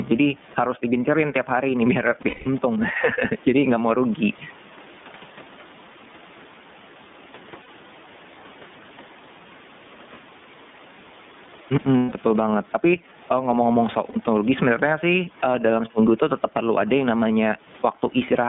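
Throughout, the gain is pulled down on each loud syllable, swinging by about 15 dB. This is likely a fast limiter fighting excessive gain. The speech is also carried by the iLBC codec. The band runs from 150 Hz to 3.6 kHz, and the speech sounds rough and synthetic, which fits 30 ms frames at 13.33 kbps.

At 2.22 to 2.47 s, just after "tiap hari nih biar", lost iLBC frames leave a held, buzzy vowel lasting about 200 ms. Shorter repeats follow at 7.62 s and at 12.0 to 12.1 s. The last comes at 14.09 s, just before "sebenarnya sih eee dalam". Each recovers almost immediately.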